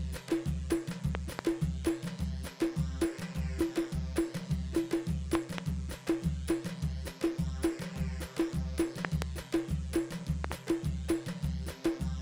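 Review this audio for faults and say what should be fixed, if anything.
Loud pops, each a sharp double thump well above the sound, at 1.15–1.41 s, 5.35–5.60 s, 9.05–9.24 s and 10.44–10.54 s, likely voltage spikes from a switch, connector or static. Secure connectors, mute before switching anything, and ground the equipment against static.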